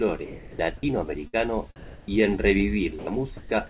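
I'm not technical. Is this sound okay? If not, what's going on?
No. This is speech, and it has a few short problems.

Sound dropped by the voice detector at 0.25 to 0.59 s, 2.99 to 3.07 s and 3.37 to 3.51 s: the speech briefly gives way to flat hiss. The call system likely mistook some of the sound for background and stopped sending it, so what was said there is lost.

Onset clipped by the voice detector at 0.81 s: a sound starts abruptly, its soft beginning shaved off, likely because the system reacted late. This differs from the dropouts because only the start is missing.

Burst of packet loss at 1.27 to 1.35 s: a piece of audio went missing in transit. The player stretched the last sound into a brief fading smear, then jumped ahead. Unlike the hiss dropouts, the gap is filled with leftover speech sound.

Comfort noise in place of the background at 1.76 to 2.08 s: during a pause, the real room background is swapped for smooth artificial hiss at a slightly different level, likely filler from the call system. 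No speech is lost.

Throughout, nothing above 4 kHz comes through, which gives the usual phone-call sound.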